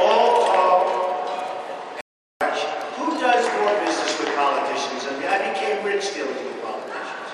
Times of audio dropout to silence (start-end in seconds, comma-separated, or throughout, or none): 2.01-2.41